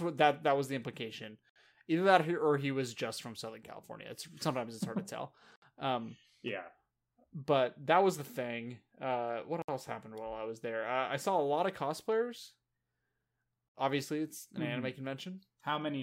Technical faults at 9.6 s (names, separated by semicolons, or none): gap at a join of encoded pieces